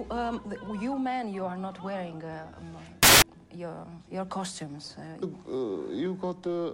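From 3.03 to 3.22 s, roughly 0.19 s, the audio turns to loud, harsh broadband noise: samples built from the wrong bytes. The reader misassembled each sample's bytes, through an offset, swapped order or wrong alignment, so the rapidly changing low bits dominated every value.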